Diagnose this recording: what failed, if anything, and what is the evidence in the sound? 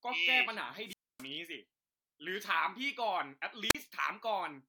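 The failure is in the radio link ahead of the analogue input: a wireless microphone squelch dropout, occurring twice in this speech clip. From 0.85 to 1.26 s, hiss swells briefly, then the receiver mutes the output for about 0.27 s before the signal returns. A shorter event at 3.69 to 3.75 s follows the same pattern with a mute of about 39 ms. In both cases the FM carrier faded below the receiver's squelch threshold, so the receiver silenced its output.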